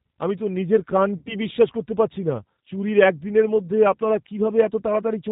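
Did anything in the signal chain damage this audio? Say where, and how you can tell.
Yes. The codec stage is G.729: the whole clip is band-limited to 4 kHz with a rough, synthetic, pulse-built texture, which fits an 8 kbit/s G.729 coder.

At the network stage, VoIP packet loss concealed by the speech codec appears from 1.18 to 1.36 s. The decoder stretches the last pitch and filter into a fading buzzy tone or coloured noise, consistent with about 80 ms of lost packets.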